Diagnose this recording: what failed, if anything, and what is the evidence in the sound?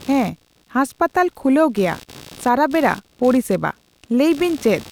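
Computer activity noise at the analogue wiring stage: a chirping buzz runs under the speech throughout, pulsing about 70 times a second, roughly 25 dB down. Processor or graphics load shifts the shared ground. A spectrogram shows regular vertical striations unrelated to the speech.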